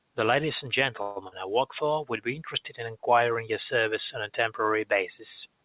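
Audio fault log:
1.02 to 1.18 s, call audio freeze: the sound stalls for about 0.14 s and is stretched as a fading buzz or hiss rather than dropping to silence. This is likely a jitter buffer running dry while packets were delayed, so nothing is lost but everything afterwards arrives 0.14 s late.
1.28 to 1.34 s, short concealed packet loss: 40 ms of audio never reached the decoder and was replaced by a synthetic continuation of the preceding sound before blending back, heard as a brief smear or wobble, with the band-limited G.711 path leaving nothing above 4 kHz.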